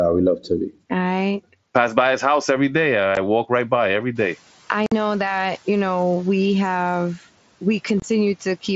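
At 3.15 s, between "his house every day" and "walk right by every", then from 4.86 to 4.92 s and from 8.00 to 8.02 s, unconcealed Bluetooth headset packet loss replaces dropped headset audio with silence. The waveform shows flat, sharp-edged gaps, and the spectrogram shows thin blank vertical stripes. Each gap is a short hole in the speech with abrupt edges.

From 7.18 to 7.29 s, after "you know we have", the noise suppressor mistakes speech for noise and cuts about 100 ms of it by up to about 10 dB. It sounds swallowed, and on the spectrogram that stretch fades into the background.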